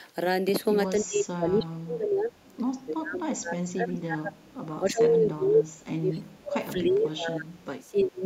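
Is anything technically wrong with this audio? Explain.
Yes. The speech is pulled down in three stretches, consistent with speech suppressed in double talk: 0.92–2.33 s (deepest dip around 35 dB), a brief 2.58–2.63 s dip of about 10 dB, and 2.86–8.24 s (around 30 dB). The likely cause is an echo canceller that, with both sides talking, cannot tell this talker from loudspeaker echo and attenuates everything. On the waveform the envelope drops in these spans, and the spectrogram fades or breaks into fragments.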